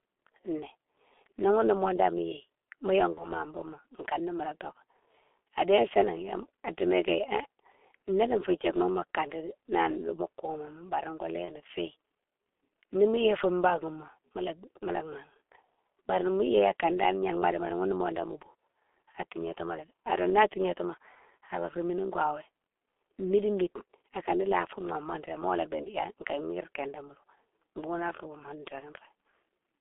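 Throughout the speech the G.723.1 codec shapes the sound. The line band is roughly 300 Hz to 3.4 kHz, and the damage is heavy, which fits a 6.3 kbit/s stream. The slow-updating voice model leaves the voice muffled and hoarse, with smeared consonants.

At 3.14 to 3.28 s, just before "ma bougma kané mola", there is VoIP packet loss concealed by the speech codec. The gap sounds like one lost 30 ms frame. The decoder carries its last pitch and filter forward at falling gain, giving a brief stretched sound that fades. The voice stays weakened a little past the gap. The same concealment recurs at 11.45 to 11.55 s.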